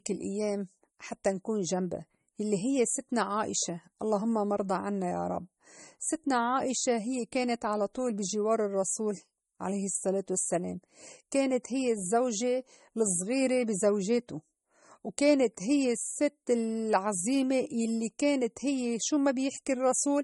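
Throughout the speech, nothing sounds above about 11.1 kHz, leaving it dull. A spectrogram shows a hard shelf at that line. The likely cause is low-bitrate audio saved at a high bitrate: a roughly 32 kbit/s MP3 re-encoded at 192 kbit/s, which cannot restore the removed top end.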